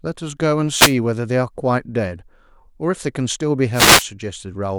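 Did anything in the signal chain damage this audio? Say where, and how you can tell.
Yes. The damage happens at the radio link of a wireless microphone, before the converter. Two wireless microphone noise hits occur, from 0.70 to 0.96 s and from 3.73 to 4.06 s. Each is a short swish of static that rises over the speech. The FM carrier faded as reflected paths cancelled, so receiver noise came up. Network packet loss would leave gaps or a robotic, repeated sound instead of hiss.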